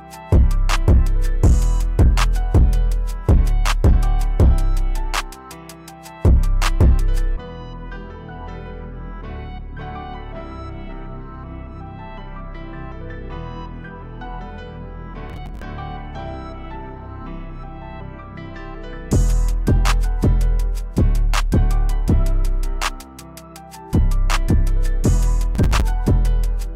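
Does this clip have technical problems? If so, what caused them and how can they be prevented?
Yes, there are two bursts of processor overload crackle, from 15.30 to 15.63 s and from 25.55 to 25.82 s. The processor could not fill its short audio buffers in time, and the grain of the crackle fits buffers of around 5 ms. About 30 and 20 of them were skipped across the two bursts, each leaving a hard-edged gap. On a spectrogram this appears as a cluster of thin vertical broadband stripes, and the waveform shows many tiny dropouts with abrupt edges. Larger buffers and less competing processing load would prevent it.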